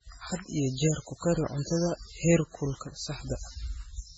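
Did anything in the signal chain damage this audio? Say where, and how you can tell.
Yes. Throughout the speech the sound is watery and swirly, with metallic chirping on s sounds and smeared consonant onsets, and nothing is present above 7.9 kHz. This is likely MP3 compression at the codec stage. Starved of bits, the encoder cut the treble at a fixed point and dropped weak frequency lines that flicker on and off between frames. Damage this heavy suggests a very low bitrate, around 16 kbps.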